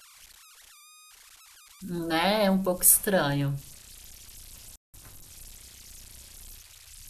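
Throughout the speech, converter idle tones sit about 25 dB below the signal: a faint whistle around 1.5 kHz in the pauses and a grainy texture under quiet passages. An undithered delta-sigma converter is falling into repeating bit patterns at low levels. Unlike hum or broadband hiss, the pitch is high and unrelated to mains frequencies.

At 4.76 s a playback stall cuts the sound dead for 182 ms, until 4.94 s. The player was likely starved of data or its thread was blocked. The audio resumes exactly where it broke off, so nothing is skipped, which distinguishes it from a dropout that loses material.

From 4.94 s to 5.30 s comes catch-up at higher speed. The backlog is played at 1.5 times normal speed by resampling, which lifts the pitch by about seven semitones, a chipmunk-like rise. It then snaps back to normal. Because pitch moves with tempo, this is resampling rather than time-stretching.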